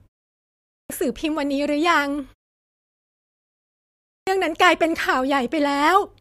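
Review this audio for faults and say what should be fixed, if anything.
Speech bursts in abruptly with its opening sounds missing, a clipped start after a pause, at 0.53 to 0.90 s (about 370 ms lost after a 0.53 s silence) and at 3.83 to 4.27 s (about 440 ms lost after 1.6 s). The output device dozes during silence and needs time to wake and lock before it plays, so the first part of the speech is swallowed. To prevent it, keep the output device active through silences, or prime it with a short lead-in before playback resumes.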